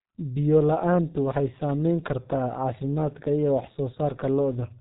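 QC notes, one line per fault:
Throughout: G.723.1 codec. Nothing above 3.8 kHz survives, so the speech sounds muffled. Damage is heavy. The coder works in 30 ms frames and updates its voice model slowly, so consonants blur and the tone turns hoarse. The sound fits a stream near 6.3 kbit/s.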